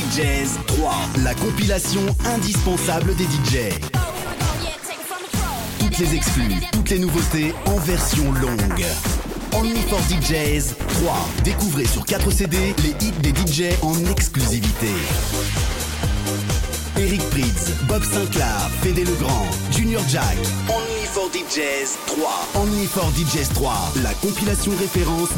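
Nothing goes wrong anywhere in this one; the 8-bit storage carries its usual faint grain underneath, and that's just how the format sounds here.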